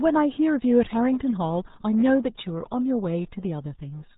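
Throughout the speech, the sound is muffled and gargly, with nothing above about 3.8 kHz and heavy smearing of detail. That points to the RealAudio 14.4 codec, whose very low data rate, which fits about 8 kbit/s for dial-up modems, discards the upper band and coarsely models the rest.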